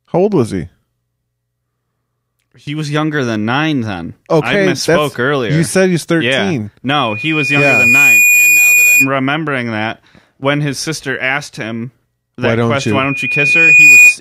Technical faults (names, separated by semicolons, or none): loudspeaker feedback squeal